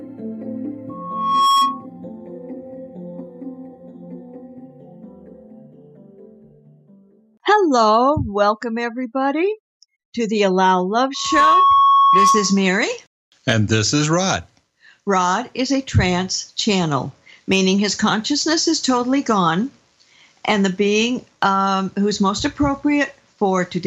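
At 0.89 s a loudspeaker feedback squeal swells over about half a second into a steady 1.1 kHz tone, holding until 1.86 s. It returns from 11.14 to 12.68 s at the same 1.1 kHz pitch, building faster, in a fraction of a second, and peaking roughly 5 dB above the programme. The microphone is hearing its own loudspeaker, and the loop gain at that one frequency exceeds unity. The fixed pitch and gradual growth separate it from a test tone or an electrical whine.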